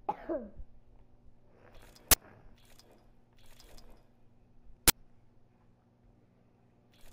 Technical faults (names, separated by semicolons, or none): uninitialised buffer